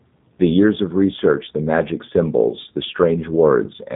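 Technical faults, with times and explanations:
Throughout, G.729 codec: the speech sounds clearly rough, buzzy and slightly synthetic, with nothing above 4 kHz. At 8 kbit/s the codec rebuilds each 10 ms frame from a vocal tract filter, a pitch predictor and a few coded pulses, which discards fine waveform detail.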